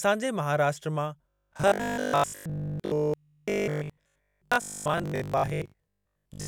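Robotic sound from repeated short buffers runs from about 1.30 s, right after "जे महाराष्ट्र मां", to the end of the clip at 6.47 s. The speech collapses into a rigid, metallic buzz near 50 Hz that still loosely tracks the words. This is likely because new audio arrived too slowly, so the same 20 ms slice was replayed over and over while fresh material was dropped. That happens for most of this stretch, and the 20 ms repetition itself sets the fixed buzz pitch.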